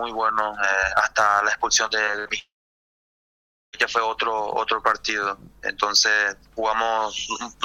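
Repeated packet loss (robotic sound) runs from 2.05 to 2.31 s. Packets kept going missing or arriving too late, and the receiver patched each hole by stretching the sound just before it. The sound suggests about four separate holes, the longest roughly 57 ms. Together they cover about 45 percent of this quarter-second. The patches and the missing pieces alternate quickly, giving a choppy texture with small bits of the sound lost.

A long network dropout follows from 2.39 to 3.75 s, most likely a break in delivery where nothing reached the receiver for about 1.34 s. At first the last sound is continued as a brief buzz that fades within roughly a tenth of a second. Then about 1.24 s of silence follows. When the audio resumes at 3.75 s, it picks up further along, and the stretch that never arrived is simply missing.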